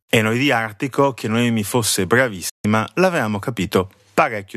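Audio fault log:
2.49 to 2.65 s, digital broadcast dropout: the speech fades out over 8 ms, drops to silence for 144 ms, then comes back. The receiver muted until good frames returned, which fits about six lost frames, so whatever was sent in that gap is gone.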